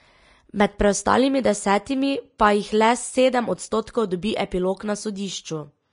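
From start to finish the speech carries damage of the kind left by low-bitrate Vorbis compression, likely the cause here. Nothing remains above 10.6 kHz, and the treble below that cut-off has been quantised so coarsely that its detail is replaced by noise-like texture. The result sounds hissy and grainy, with tones roughened and consonant onsets smeared, a degree of damage that fits a bitrate around 34 kbps.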